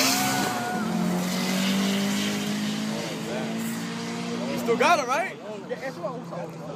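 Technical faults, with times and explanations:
Nothing technical goes wrong anywhere in this one, so there's nothing to flag.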